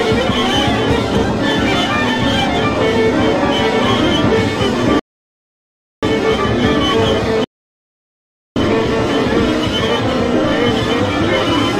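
At 4.99 s the audio drops to silence and stays silent until 6.03 s, a rebuffering stall. The player exhausted its downloaded audio and paused for more data. Playback resumes exactly where it stopped, so nothing is lost, but about 1.03 s is added.

From 7.44 s to 8.56 s a second gap of about 1.12 s interrupts the sound mid-flow before it continues. This playback stall was likely caused by the output running short of data or its thread being blocked.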